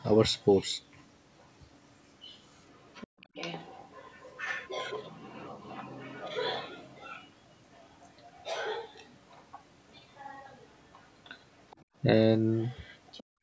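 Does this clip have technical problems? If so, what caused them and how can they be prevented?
Yes. Other side's voice leaking through, from 0.4 to 9.97 s and again from 10.93 to 13.23 s: a second, faint voice sits under the main speech, roughly 20 dB down in the first stretch and fainter still, around 30 dB down, in the second. This is likely far-end audio from the talker's loudspeaker reaching the microphone and surviving the echo canceller's subtraction. Using a headset, or lowering loudspeaker volume and keeping the microphone away from it, would prevent this.

Background gated by the echo canceller, at 3.07 to 3.2 s, 11.84 to 11.95 s, and from 13.23 s to the end: the room sound briefly drops out, by about 40 dB, about 35 dB and about 40 dB respectively, then comes back. Each dip lasts only a fraction of a second. The canceller's suppressor clamped the microphone hard while the loudspeaker was active and released once it judged the echo gone. 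The band limit at 8 kHz is the call's normal microphone processing and is not part of this fault. Gentler suppression settings, or a headset that removes the echo path altogether, would prevent these dropouts.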